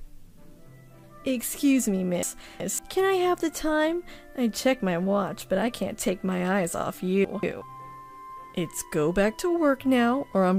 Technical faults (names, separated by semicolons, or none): chunks out of order